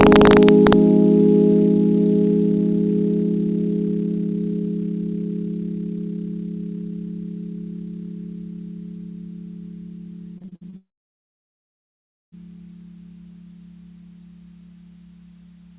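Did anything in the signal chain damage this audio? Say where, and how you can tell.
Yes. The first fault sits in sample-format conversion: integer overflow from 0.01 to 0.73 s. Peaks that push only about 1 dB past full scale wrap around to the opposite extreme instead of being held at the limit, so each one becomes a full-range jump. The result is harsh, splintering cracks on the loudest moments, far sharper than the flattened edge of ordinary clipping.

The network stage produces repeated packet loss with a robotic sound from 10.38 to 10.74 s. Roughly seven short holes arrive in quick succession, the longest about 54 ms. The receiver bridges each by extending the previous audio, so about 42% of that span is filled-in material. It comes out choppy, with fragments missing, and the band-limited G.711 call path, with nothing above 4 kHz, makes it sound thinner still.

Directly after that, from 10.76 to 12.34 s, the audio stops for about 1.6 s. 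A brief decaying continuation of the last sound is followed by roughly 1.5 s of silence, and then the sound resumes with that stretch gone. This is consistent with a long network dropout, most likely the stream ceasing to arrive entirely, with concealment giving up after its first fraction of a second.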